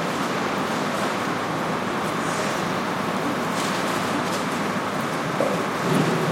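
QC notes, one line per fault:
2.49–4.08 s, crude rate conversion: a gritty, inharmonic fizz rides on the sound, strongest on loud and bright moments, with shifted, inharmonic copies of the material, sitting roughly 25 dB below the signal. The audio was converted from 48 kHz to 44.1 kHz by simply dropping samples, with no interpolation or anti-aliasing filter. The skips recur in a fixed pattern set by that ratio, so the error repeats and forms spurious tones.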